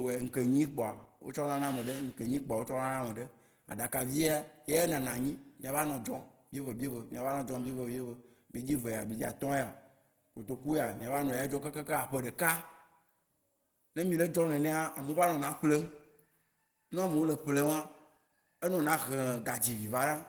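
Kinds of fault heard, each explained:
Opus compression: likely a low-rate Opus encode in its hybrid speech mode, around 16 kbps; the speech sounds plainly muffled and hoarse throughout.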